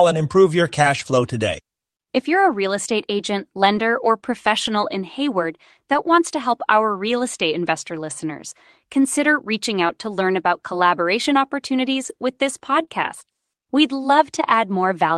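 From 0.99 to 1.13 s, a lost packet is rebuilt from error correction. It covers about 80 ms, which fits four lost packets. Each was replaced by the low-bitrate copy carried in the next packet, so there is no gap, only rougher, noisier sound.

Shorter rebuilt stretches follow at 3.75 to 3.77 s and 4.65 to 4.67 s. Another comes at 5.93 to 5.95 s, just before "wants to help our".

From 9.87 to 9.91 s comes a short concealed packet loss. About 20 ms never arrived in time. The decoder extended the previous sound and blended back, leaving a brief smear. This overlaps a rebuilt packet at 9.89 to 9.91 s, between "investor listeners consider reaching" and "to learn about collaboration".

From 12.05 to 12.11 s, two packets' worth, about 40 ms, is rebuilt from error correction, sounding grainy just before "with this".

At 12.85 to 12.89 s, a second short concealed packet loss fills a 20 ms hole with continued sound, heard as a small wobble.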